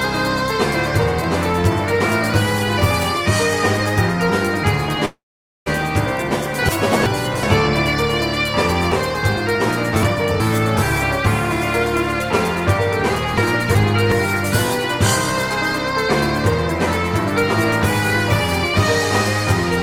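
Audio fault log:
5.05–5.68 s, call audio freeze: the last sound is carried on as a fading buzz, then sinks to silence for about 0.47 s, and the audio resumes where it stopped. This likely came from packets held up in transit, emptying the jitter buffer and inserting a 0.61 s gap.
6.69–7.43 s, 8.92–10.40 s and 13.38–14.12 s, chunks out of order: each span sounds jumbled, with three hard joins. A 0.37 s chunk arrives late and plays after the material that should follow it: one chunk late in the first and third spans, three in the second.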